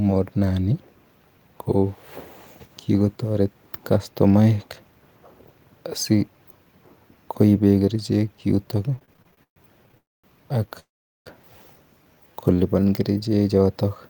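Speech, running normally until 8.91 s, when repeated stalls (stutter) set in and last to 9.98 s. Fourteen brief hold-ups break the flow there, the longest about 128 ms. Together they fill roughly 320 ms with stretched-out continuation of the preceding sound, close to a third of that stretch. Packets were arriving late or too slowly, so the jitter buffer kept draining and the receiver bridged each wait. On a spectrogram this shows as short runs of smeared, repeated harmonics with blurred onsets. On the waveform the envelope holds flat or fades where it should move on.

A call audio freeze follows directly, from 9.98 to 10.25 s. The sound hangs and then drops to near silence for about 230 ms before resuming where it stopped. A second, longer freeze runs from 10.79 to 11.28 s, with roughly 410 ms of its 463 ms silent. Each freeze pushes the rest of the speech later by its full length, and nothing is lost. 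The likely cause is packets held up in transit, so the buffer emptied completely. Both freezes appear as a brief tail of frozen spectral bands fading into a blank column, a flatline on the waveform.

A jitter buffer slow-down then occupies 12.04 to 12.85 s. The buffer rebuilt its reserve by repeating single pitch periods and pause fragments, adding about 92 ms. The speech plays at 90% speed without any change in pitch, so sounds are drawn out. On the spectrogram, harmonic spacing stays constant while the syllable patterns stretch horizontally. The waveform shows cycles repeated back to back.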